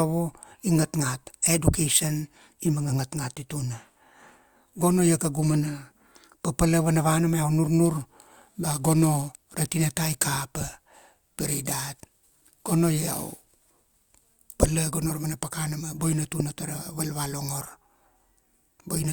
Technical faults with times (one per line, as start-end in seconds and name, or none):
7.85-14.34 crude rate conversion